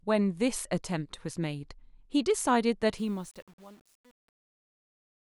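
From 2.98 s to 5.32 s, the speech fade-out runs through a stage that truncates without dither, which fits an 8-bit path. The result is truncation distortion on a fade: from 3.1 s the falling level grows gritty.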